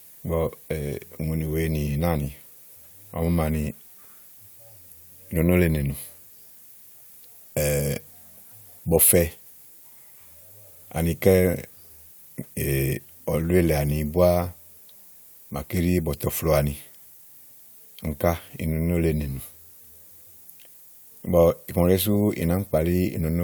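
From start to finish the speech carries low bit depth with noise shaping: a steady, thin hiss roughly 25 dB below the speech, rising sharply toward the top of the band. The coarse rounding error has been fed back and pushed upward, which fits about a 9-bit word length.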